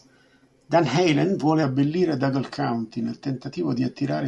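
From 0 to 1.63 s the speech plays at the wrong sample rate. It runs about 1.09 times too fast with no conversion. Pitch rises by about 1.5 semitones. Voices sound slightly high and hurried, which fits 22 kHz audio played at 24 kHz.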